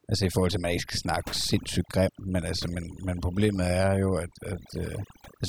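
A short speech recording suffers from overdone noise removal across its whole length. The noise reduction was pushed too hard. Frequency bands near the noise estimate are cut away, along with quieter parts of the voice. The background drops and breaks up into twinkling specks.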